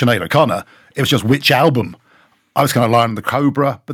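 Microphone overload, likely from an input gain set too high, drives peaks about 3 dB past the converter's limit from 0.02 to 0.44 s, 1.13 to 1.69 s and 2.58 to 3.04 s. A small share of samples, around one or two percent, get their tops flattened, giving the loudest speech a harsh, crackly edge. At 3.09 s the microphone volume is stepped down by about 4 dB, so speech and background drop abruptly right after the last distorted stretch.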